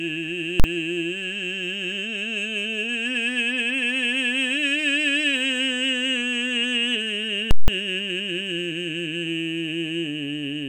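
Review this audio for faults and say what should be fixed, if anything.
Invalid numbers at full scale hit the music at 0.60 to 0.64 s and 7.51 to 7.68 s. Infinite or invalid results pinned the output to one extreme value for a whole processing block, which fits 2048- and 8192-sample blocks. Unlike clipping, the music vanishes entirely while the output is held. To prevent it, check each block for infinite or invalid values and replace them before output.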